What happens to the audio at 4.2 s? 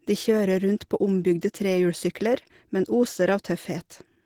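At 4.2 s the speech is still carrying the Opus compression that runs through the whole clip, likely from an encode at about 16 kbps in hybrid mode, where the low band is coded by the speech layer and the top by the music layer. Despite full bandwidth, with content reaching about 20.2 kHz, bits are so scarce that the damage is plainly audible: the voice sounds muffled and hoarse, with a rough, grainy texture.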